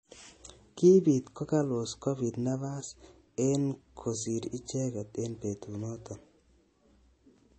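Speech, with MP3 compression throughout: watery, swirly artefacts, nothing above 8.3 kHz, likely from a low bitrate around 32 kbps starving the encoder.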